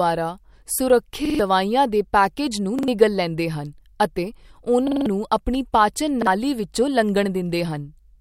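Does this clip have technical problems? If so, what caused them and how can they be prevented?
Yes, this speech clip has repeated buffer stutters at 1.25–1.39 s (just before "ਦੇ ਪੈਕੇਜ ਨੂੰ"), 2.79–2.88 s (before "ਲੈਂਦੇ ਹਨ ਅਤੇ"), 4.88–5.06 s (before "ਆਪਣੀ ਪਾਚਨ") and 6.22–6.27 s. Each time, fresh audio arrived late, so the device replayed the last 46 ms chunk (which fits a 2048-sample buffer) one to four extra times, with hard joins and up to about a fifth of a second lost. A larger buffer or a higher-priority audio thread would prevent this.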